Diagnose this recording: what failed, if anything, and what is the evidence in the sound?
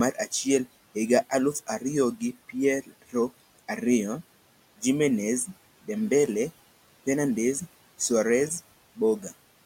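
The failure sits in call processing. Between 2.83 and 3.14 s, speech is cut by the noise suppressor. The suppressor mistook part of the speech for background and pulled it down along with the room noise, which stays about 22 dB below the speech. Within that window, roughly a tenth of a second in total is turned down, by about 16 dB at the deepest point. Those parts sound swallowed and faint.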